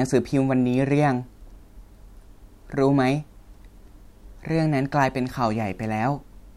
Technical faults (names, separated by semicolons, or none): overlapping chunks